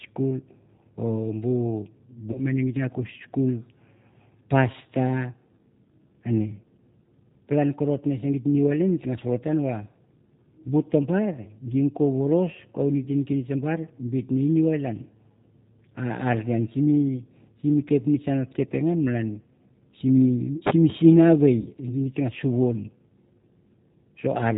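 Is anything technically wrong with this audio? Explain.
Yes. Throughout, the speech has passed through the G.729 codec, and the damage is plainly audible. The encoder discards the waveform and sends only a vocal tract filter, a pitch predictor and a sparse set of pulses per 10 ms frame, consistent with an 8 kbit/s G.729A stream. The decoder rebuilds speech from that model with nothing above 4 kHz, so the voice sounds band-limited, slightly rough and synthetic.

There are also two dropouts of VoIP packet loss concealed by the speech codec, from 2.32 to 2.43 s and from 21.61 to 21.68 s. About 30 ms of audio is missing in the first and about 40 ms in the second. When packets stopped arriving, the decoder kept extending its last pitch and filter state while lowering the gain. Each gap is therefore filled with a stretched, fading sound rather than silence, and the voice stays weak and smeared for a short while after the real packets resume.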